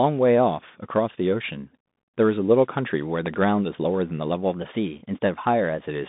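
Throughout, the speech sounds boxed-in and narrow, with scratchy s sounds, a granular hiss underneath, and nothing above 3.8 kHz. This is the Bluetooth CVSD headset codec: its one-bit delta coding, consistent with a 64 kbps link, confines the line to roughly 150 Hz to 3.7 kHz.

At 3.26 to 3.36 s, two sharp pops land on top of the speech, which carries on beneath them, peaking roughly ten decibels above it. This loud pop is likely a voltage step or pulse from static, a switch or a driver glitch.

From 4.53 to 5.82 s, the speech suddenly runs 5.9% faster and a semitone higher. This drift correction step is likely clock-matching software changing the playback rate in one jump to rebalance its buffer.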